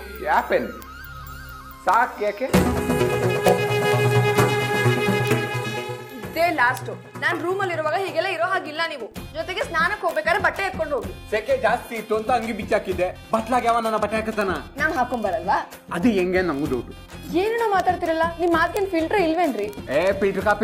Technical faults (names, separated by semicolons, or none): word clock ticks